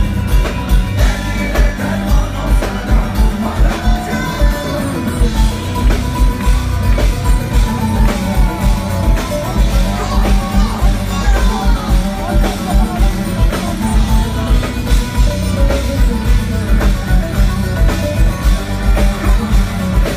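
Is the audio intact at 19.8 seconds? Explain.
Yes, the audio is intact at 19.8 seconds, with no fault at that point.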